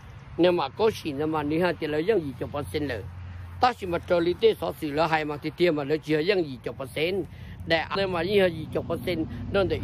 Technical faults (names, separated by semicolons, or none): damaged data in a compressed stream